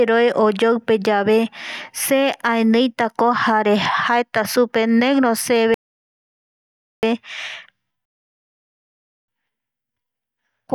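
The player's buffer ran dry twice in this speech recording, producing a rebuffering stall each time: playback halts from 5.74 to 7.03 s and again from 8.05 to 9.28 s while more audio downloads. Each stall drops the sound to dead silence, then picks up exactly where it stopped, so nothing is skipped, but the pauses add about 1.29 s and 1.23 s of time and break the natural rhythm of the speech.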